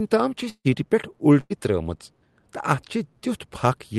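A short speech clip carried over a call path with an Opus-style codec, band-limited to about 12 kHz. From 0.49 to 0.67 s there is a long network dropout, likely. The last sound is stretched into a fading buzz or hiss for about 150 ms, then near-silence follows. About 160 ms of speech never arrives. At 1.41 to 1.52 s a burst of packet loss occurs. Roughly 100 ms of audio is lost. The receiver fills the gap with a held, fading continuation of the preceding sound, then resumes further on.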